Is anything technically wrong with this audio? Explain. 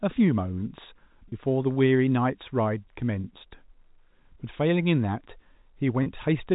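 Yes: packet loss with pitch repetition at 1.29, 3.21 and 6.03 s, each gap about 30 ms, fitting one lost packet. The receiver repeated the last pitch period, producing a brief held, buzzy tone. The narrowband telephone sound of G.711 coding is also audible.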